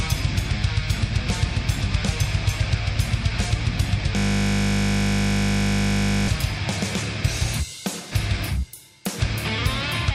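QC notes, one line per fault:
4.17–6.28 s, system hang loop: a single 20 ms slice of audio repeats exactly, about a hundred times, as the host stalls while the playback hardware keeps cycling the same ring buffer. The loop is so short that it fuses into a steady buzz at 50 Hz rather than a stutter. On a waveform, identical 20 ms cycles tile the region. On a spectrogram, it shows as a frozen comb of horizontal lines spaced 50 Hz apart.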